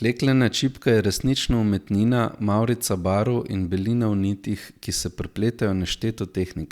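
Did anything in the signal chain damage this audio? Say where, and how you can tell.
No, nothing in the signal chain damaged this audio.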